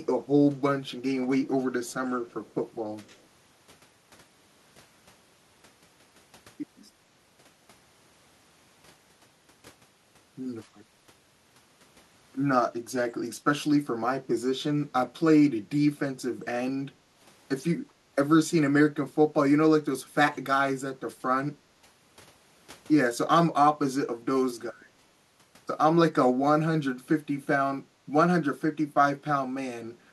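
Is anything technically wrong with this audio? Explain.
Yes. From 2.31 to 2.54 s a very faint copy of the speech trails it by about 208 ms, likely an echo leak from a loudspeaker-side canceller letting residue through.

At 16.73, 17.87, 21.68, 27.88 and 29.98 s the room sound briefly dips by about 9 to 16 dB for around a tenth of a second. This is background gated by the echo canceller, which clamped the microphone while the loudspeaker played.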